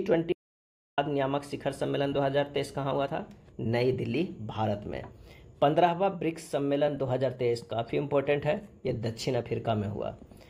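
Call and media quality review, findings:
Audio dropout to silence, 0.32–0.98 s. Sound cuts out mid-flow and returns after about 0.65 s of silence, with no room tone or noise floor underneath. Likely cause: input lost upstream (disconnected device, failed link or stray mute) while the recorder kept writing silence. Distinct from packet loss concealment or a noise gate: no smeared repeats, no fading tail, no residual hiss. Content during the gap is unrecoverable.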